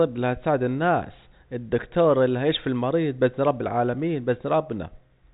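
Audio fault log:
No faults heard.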